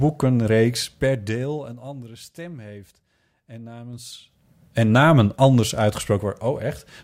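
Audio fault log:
0.78–2.14 s, zipper noise: the level drops by about 20 dB in about 2 dB steps, roughly seven per second, before "stem heeft en". The ticks show as thin vertical lines on the spectrogram and a staircase envelope on the waveform.
3.9–4.5 s, zipper noise: the level rises by about 20 dB in about 2 dB steps, around fifteen per second, before "en namen anders". Each unsmoothed jump clicks, showing as a broadband vertical streak and a visible step in the envelope.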